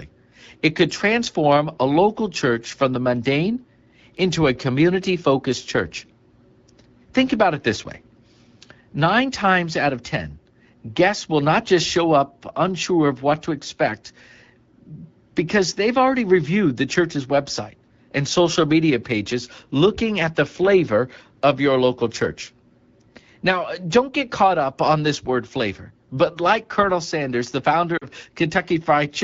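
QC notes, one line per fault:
27.97–28.07 s, lost AMR speech frames: corrupted frames failed their checksum, so the AMR-WB decoder rebuilt the speech from the last good pitch and vocal tract settings at falling gain. The 40 ms gap, which fits two 20 ms frames, dips sharply toward silence, then recovers briefly rough.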